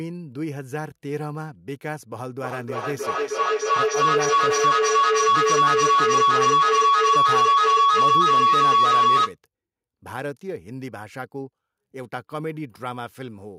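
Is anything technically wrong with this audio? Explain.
Yes. From 2.4 s to 9.37 s a piercing tone around 1 kHz rises out of the speech, peaking at about 12 dB above the speech level. This is feedback howl: two devices in the same room are joined to one call, so sound travels from microphone to loudspeaker and back, gaining level on each pass. Each pass adds a delay of about 300 ms, and the loop reinforces a narrow band near 1 kHz until it is broken.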